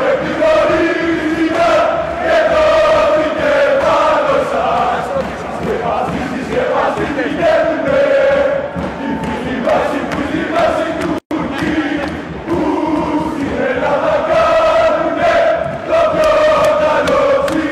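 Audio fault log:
11.18 to 11.31 s, gap at a join of encoded pieces: the sound just drops out for about 126 ms and then picks up right where it left off, with nothing missing. That's what you get when two separately encoded chunks are butted together without trimming. The encoder's start-up delay on the second piece and the padded last frame of the first both stay in, leaving this silent hole with smeared edges.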